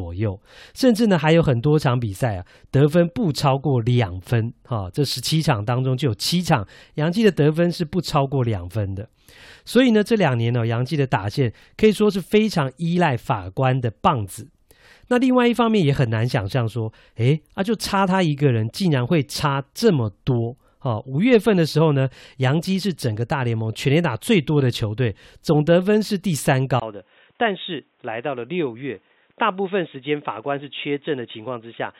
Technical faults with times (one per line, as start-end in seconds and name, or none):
26.80-32.00 input switched to a poorer device